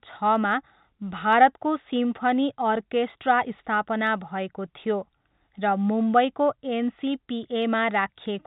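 Clock slip clicks run from 0.20 s to 8.43 s: around fifty faint, evenly spaced ticks, roughly every 0.15 s, riding on the speech and dropping out in pauses. Each is a single sample dropped or repeated, likely because two devices run on free clocks that disagree by something on the order of 150 ppm, so a whole sample's error builds up at a steady rate. The telephone-band coding, with nothing above 3.8 kHz, carries the ticks through.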